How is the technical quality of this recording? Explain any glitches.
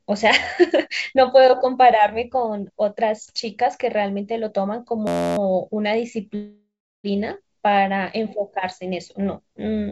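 The recording has two glitches, a stuck-buffer buzz and a stalled stretch, and the speech carries the band limit of a call codec, with nothing above 8 kHz.

From 5.07 to 5.38 s there is a system hang loop. The machine froze while the audio hardware kept replaying one 11.61 ms slice, which fits a 512-sample buffer, about 26 times. This is heard as a steady buzz at 86.1 Hz. On a waveform it appears as an exactly repeating short pattern. A spectrogram shows harmonic lines spaced 86 Hz apart.

From 6.35 to 7.07 s there is a call audio freeze, likely caused by delayed packets draining the jitter buffer. The receiver stretched the last sound into a fading buzz or hiss that settles into about 330 ms of silence, 689 ms of filler in all. Speech then resumes where it stopped, shifted about 689 ms later, with nothing missing. A spectrogram shows a smeared, decaying band followed by an empty gap.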